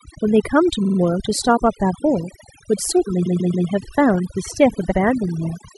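Overdone noise removal runs through the whole speech clip. The denoiser was set so hard that it cuts whole frequency bands whenever they drop near its noise estimate, taking the softer parts of the voice with them. The background falls to near silence sprinkled with twinkling specks. On a spectrogram the gaps between phrases are dark and dotted with isolated bright flecks, and the speech itself shows ragged holes.

Repeated frames occur three times. From 0.84 to 0.98 s, a 46 ms block, which points to two compressed frames, plays three extra times and adds 139 ms. From 3.25 to 3.67 s, a longer 139 ms block, which fits about six frames, also plays three extra times and adds 418 ms. From 4.90 to 4.97 s, a 70 ms block, which suggests three frames, repeats once. Each is heard as a stutter. The waveform shows identical copies placed side by side, and the spectrogram shows the same pattern repeated.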